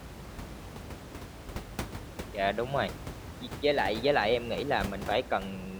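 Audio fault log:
Nothing to log here, just speech with room tone sitting about 12 dB underneath it.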